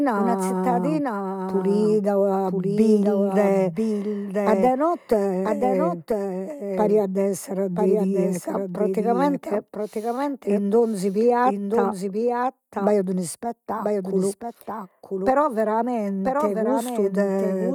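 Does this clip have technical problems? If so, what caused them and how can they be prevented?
Yes. Throughout the speech, each phrase returns as a second full-band copy about a second later and roughly 5 dB quieter. The copy has no reverberant tail or room colour, so the two layers simply overlap. This doubled audio track likely comes from the signal being captured twice, once through a slower path, or from an edit holding two copies out of step. Checking routing for duplicate paths before recording, and muting redundant inputs, prevents it.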